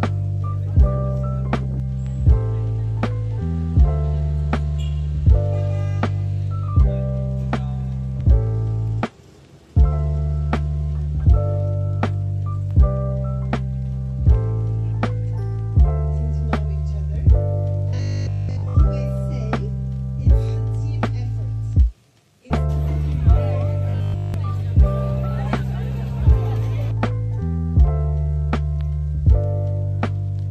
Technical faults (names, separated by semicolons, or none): robotic sound from repeated short buffers